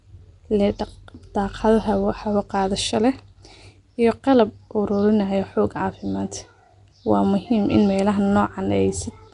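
Nellymoser compression runs throughout the speech, with plainly audible damage and nothing above 10.6 kHz. The rough, hissy halo and smeared, underwater quality likely come from the Nellymoser Asao codec, which starves weaker bands of bits and fills them with noise instead.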